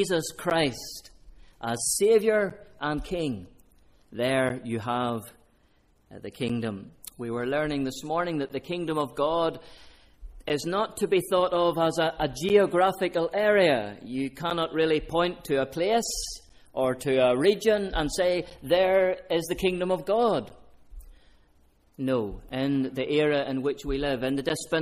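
Periodic USB or driver dropouts run through the audio from about 0.5 s to 24.5 s, recurring every 2.0 s for roughly fifteen events. At each one a background task stalls the USB bus or audio driver, and around 10 ms of signal goes missing, replaced by silence. Those brief, evenly spaced gaps cut the waveform abruptly and are heard as regular ticks or pops whenever sound is present.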